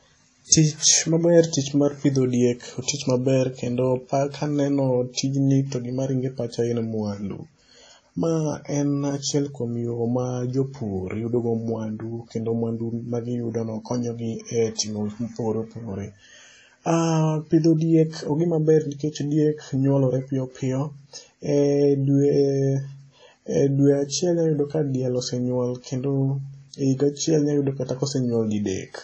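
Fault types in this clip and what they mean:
WMA compression: throughout, ringing, washy speech with breathing hiss and nothing above 9.9 kHz, likely a WMA transform encode near 32 kbps discarding weak detail.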